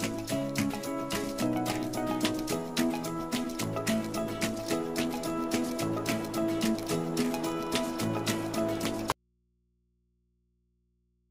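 Audio dropout to a faint residue at 9.12 s: an abrupt cut to hum, about 45 dB down, lasting to the end. Likely a lost feed.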